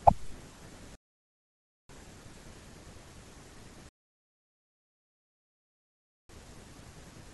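At 0.95 s the speech stops dead and stays silent until 1.89 s, then again from 3.89 s to 6.29 s. These are rebuffering stalls: playback ran out of downloaded audio and waited for more, adding about 0.94 s and then about 2.4 s. Unlike a dropout, which skips material, each stall picks up exactly where it stopped. No syllable goes missing; the gaps only stretch the timeline.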